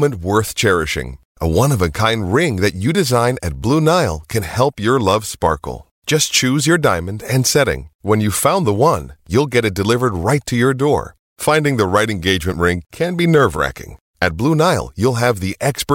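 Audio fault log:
No fault can be heard anywhere in this speech recording. There is nothing to log against any time in the audio.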